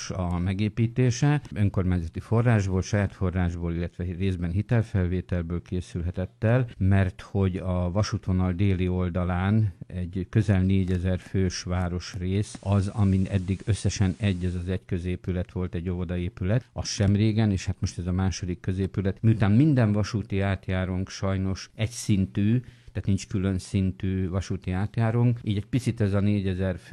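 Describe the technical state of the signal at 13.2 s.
At 13.2 s the signal is in a digital radio blend to analogue, running from 12.38 to 14.69 s. The hybrid receiver lost its digital stream and cross-faded, over about 189 ms, to the station's FM broadcast, then faded back. A steady hiss sits roughly 35 dB under the signal, and the level shifts by about 1 dB.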